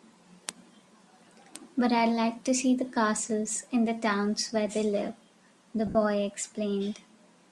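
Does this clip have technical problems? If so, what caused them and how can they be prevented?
Yes. Lost LE Audio frames occur from 5.87 to 5.95 s, where about 70 ms of the speech is missing across an 80 ms stretch, which fits a run of seven 10 ms frames. The LC3 decoder filled the gap by repeating the last good spectrum with randomised phase signs and fading it, so the sound there becomes a brief noisy, hissy smear. Keeping the Bluetooth link strong, with a short distance and little radio interference, prevents these dropouts.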